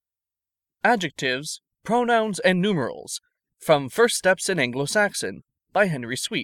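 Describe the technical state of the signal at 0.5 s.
The signal at 0.5 s is intact, with no audible fault at that point in the speech.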